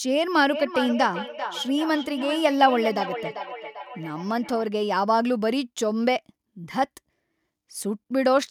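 From 0.52 s to 4.68 s there is feedback echo between two devices. A second device replays this microphone's signal, which is picked up again. The speech returns roughly every 400 ms, thinner and ringing, at most about 8 dB below the direct speech.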